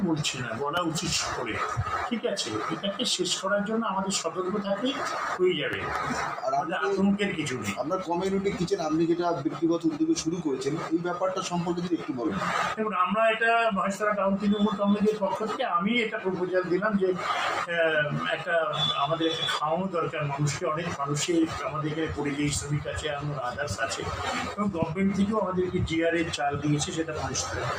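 A noise suppressor made for speech is applied throughout. It treats steady tones, ambience and tails as noise. Attacks pass, while sustained parts drop by around 5 dB. The sound pumps and thins as the gain swings.

Loud pops land at 0.77 to 0.79 s, 5.73 to 5.98 s as a double pop, and 24.82 to 24.85 s. Each peaks roughly 15 dB above the sound, which continues underneath. A voltage step, likely from a plug, switch or static, causes them.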